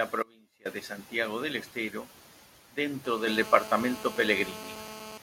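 From 0.23 to 0.65 s the speech vanishes abruptly for about 0.43 s, leaving only a faint residue roughly 25 dB below normal level rather than silence. This audio dropout to a faint residue is likely a break in the wanted signal while the path after it stayed live.

At 3.05 s a hard, raspy GSM phone buzz starts at 217 Hz, rich in harmonics and about 15 dB below the speech. It stays steady until 5.18 s, as a nearby 2G phone in a call transmits its bursts into the rectifying audio circuit.

At 3.27 s speech and background jump up together by 5 dB in a single step. This is the microphone volume being stepped up, as the call software judged the input too quiet and raised the device gain at once.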